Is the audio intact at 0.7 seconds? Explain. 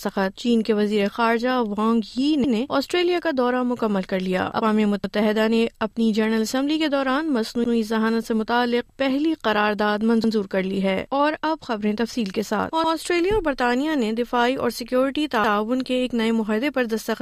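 Yes, the audio is intact at 0.7 seconds, with no fault present at that moment.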